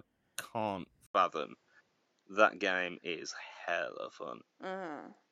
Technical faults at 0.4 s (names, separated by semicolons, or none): none